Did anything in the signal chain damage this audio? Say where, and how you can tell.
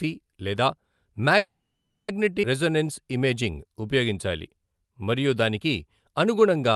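Yes. A network call audio freeze, likely from delayed packets emptying the jitter buffer: at 1.37 to 2.10 s the sound decays into about 0.44 s of flat waveform, then resumes intact.

A skip ahead in the network and jitter buffer at 2.42 to 2.45 s: roughly 0.4 s of audio is missing, shown on the spectrogram as an abrupt splice of unrelated spectral shapes.

A jitter buffer slow-down from 2.64 to 6.75 s: repeated pitch periods stretch the audio to 92% speed, adding 347 ms. The waveform shows near-identical repeating cycles, with unchanged harmonic spacing on the spectrogram.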